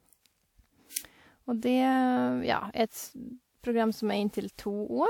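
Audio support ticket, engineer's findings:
Generation loss throughout. Likely repeated lossy transcoding, around four passes, consistent with a WMA-type codec near 96 kbit/s. Each pass requantises on a shifted frame grid, so noise and spectral holes accumulate. Speech comes out swirly, hollow and smeared, with blurred consonant attacks.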